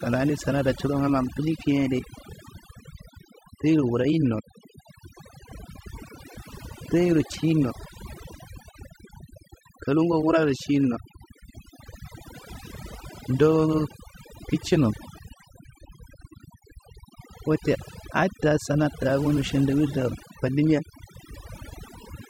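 A speech recording with overdone noise removal across its whole length. The noise reduction stage was pushed too hard, so individual frequency bands that sit close to its noise estimate are pulled far down or switched off entirely, and the quieter components of the voice are stripped out along with the noise. The gaps between phrases drop to near silence dotted with twinkling, chirpy specks.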